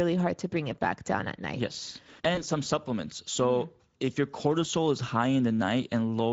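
From start to finish the speech carries Speex codec damage that is plainly audible. The CELP coder has too few bits to model the excitation faithfully, so voiced sounds come out grainy and hoarse. The degree of roughness points to a mid-range quality setting, in the region of 17 kbps, rather than the vocoder-like lowest modes.

Between 2.35 and 2.43 s, just before "some supplements", there is VoIP packet loss concealed by the speech codec. About 20 ms of audio went missing, and the decoder filled the gap by extending its last pitch and spectral envelope at falling gain. That produces a brief stretch of fading buzzy tone or coloured noise. Because the decoder rebuilds its state frame by frame, the voice stays weak or distorted for tens of milliseconds or more after the gap itself.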